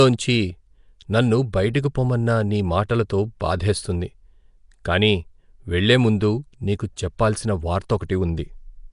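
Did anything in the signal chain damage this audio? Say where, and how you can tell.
Yes. At the codec stage, a rough, hissy, smeared quality runs throughout, with nothing above 10.6 kHz. This is likely Nellymoser compression, consistent with roughly 44 kbps.

Pre-echo, also from the codec, appears at 7.18 s as a 10 ms hiss before an attack. Quantisation noise spread across the transform block fills the quiet moment.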